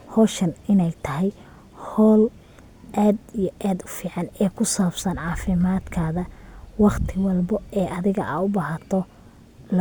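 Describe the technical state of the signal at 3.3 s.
At 3.3 s the speech signal is intact, with no audible dropout, distortion or other fault.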